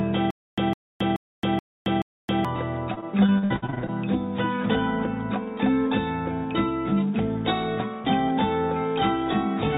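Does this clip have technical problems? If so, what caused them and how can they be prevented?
Yes. From 0.31 to 2.45 s there is a stutter with silent gaps. A 157 ms burst repeats five times, every 428 ms, with 271 ms of digital silence between. The audio meant for those gaps is lost. The likely cause is a stalled player or stream replaying its last fragment on each retry. Larger buffering and faster recovery from stalls would prevent it.

From 2.94 to 3.90 s, repeated packet loss gives a choppy, robotic sound. There are eleven short holes, the longest 60 ms. Each is patched by extending the previous sound, so about 36% of the stretch is filler. A steadier network and a deeper jitter buffer would prevent this.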